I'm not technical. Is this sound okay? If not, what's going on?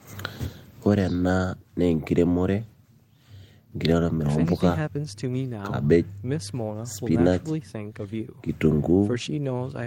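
Yes, this recording of speech sounds fine, and nothing in it stands out as a technical problem. There is nothing here that needs fixing.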